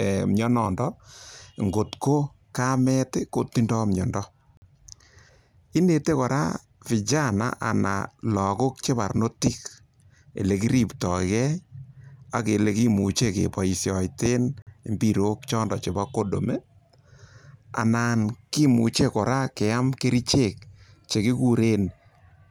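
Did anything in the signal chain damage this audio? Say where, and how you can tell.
Yes. There is a gap between chunks, introduced where the audio was split into segments for storage or playback. The speech stops dead at 4.57 s and again at 14.62 s. Each hole lasts about 48 ms and has hard edges on both sides. The two holes are about 10.05 s apart, which points to 10-second chunks. At each join, silence was inserted between chunks. Nothing is missing, but the flow is cut.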